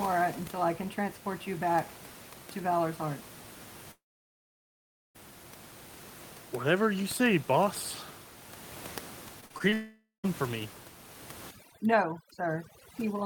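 From 3.91 to 5.17 s there is a long network dropout, most likely a stall in the incoming stream: about 1.2 s of audio never arrives. The receiver briefly carries the last sound on, then goes nearly silent for roughly 1.16 s. On a waveform this appears as a flat gap, and a spectrogram shows a blank band.

Between 9.41 and 9.74 s, repeated packet loss punches five short holes, the longest 37 ms. About a third of that span is patched by stretching earlier sound, which gives a choppy, robotic texture. A spectrogram shows smeared, repeated vertical slices there.

That run leads straight into a second long network dropout, from 9.74 to 10.26 s, likely another interruption in delivery. About half a second is lost: a concealment buzz fades and leaves about 150 ms of near silence before "for me" resumes. It reads as a thin gap in the waveform.

From 11.51 s to the end, overdone noise removal pulls the background down, with isolated twinkling specks. 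Quieter parts of the speech are cut along with the noise. On a spectrogram, the background turns dark and patchy, with scattered isolated dots.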